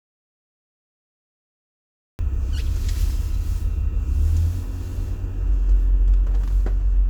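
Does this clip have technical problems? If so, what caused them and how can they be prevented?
Yes. The clip opens with an audio dropout to silence that is already under way from 0.0 s and lasts until about 2.19 s, when the sound comes in abruptly. Throughout that stretch the signal is silent, with no room tone or noise floor at all. The likely cause is a lost input, such as a disconnected device, a failed link or a mute, while the recorder kept writing silence. Anything that happened during those two seconds is gone. To prevent it, secure and check the input connection and mute state, and monitor live levels before and while recording.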